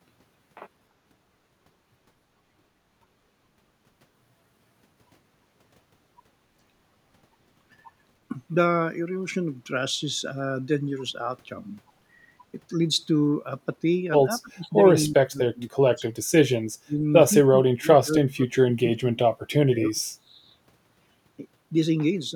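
Speech, with its second half repeatedly pushed down in level: from 14.42 to 14.73 s, 15.06 to 16.17 s, 16.84 to 17.03 s, 17.48 to 19.31 s and 19.52 to 20.5 s the talker dips sharply, by roughly 25 to 40 dB at worst, deepest in the last stretch. This is speech suppressed in double talk, likely an echo canceller mistaking the talker for loudspeaker echo while both sides spoke. On a waveform the envelope collapses in chunks; a spectrogram shows faded, gapped bands.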